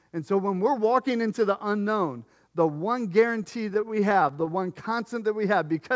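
Repeated stalls (stutter) run from 3.44 to 4.55 s in this speech clip, just after "the unknown the one". Packets arrived late or slower than playback, so the jitter buffer kept running dry, and the receiver stretched the last sound through each short gap, none longer than about 13 ms. Roughly 15% of that stretch is filled in this way. Nothing is lost, but the speech drags and judders. The G.722 call path removes everything above 8 kHz throughout.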